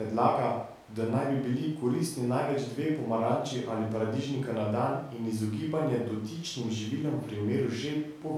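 No technical faults can be heard anywhere in the recording, and the signal stays continuous and steady throughout.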